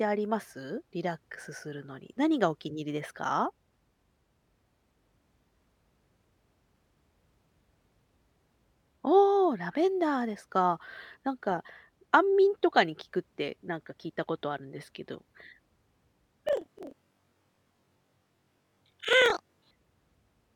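From 16.47 to 19.74 s, the speech jumps an octave with a 23.4 Hz flutter. This is planar audio read as interleaved, playing each 42.67 ms block twice at double speed.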